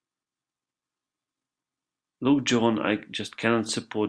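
No technical faults are audible anywhere in the speech.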